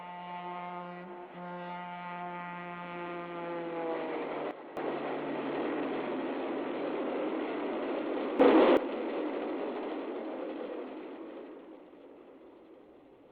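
At 4.51 s the level drops abruptly by about 12 dB and stays down until 4.77 s. At 8.4 s it leaps up by about 13 dB until 8.77 s. Both are sudden gain jumps: the step is most likely a digital gain change applied between adjacent samples with no ramp. Unlike compressor pumping or a fade, the background noise steps in level along with the sound at the same instant, with no gradual slope.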